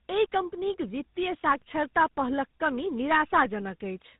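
Rough, muffled and warbly speech runs the whole length of the clip, with nothing above 3.8 kHz. It is tandem speech coding: the speech was decoded and re-encoded by two speech codecs in a row, CVSD and then GSM full rate, with G.711 mu-law between them.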